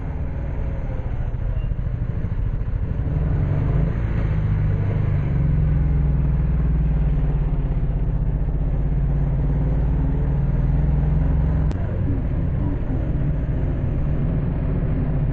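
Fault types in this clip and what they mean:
stereo read as mono: alternating left and right samples are played as one channel, so the whole clip runs at 0.5x speed, 12 semitones low, with a faint mirrored image up high.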